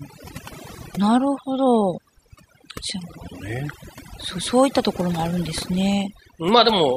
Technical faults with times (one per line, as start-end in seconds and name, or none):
0.00-6.97 overdone noise removal